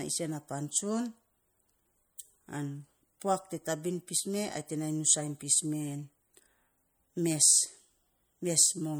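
MP3 compression runs throughout the speech, most likely from low-bitrate encoding that fits roughly 64 kbps. Short of bits, the encoder drops weak frequency components that flicker between frames, leaving a plainly audible watery swirl and smeared onsets, though content still reaches 21.1 kHz.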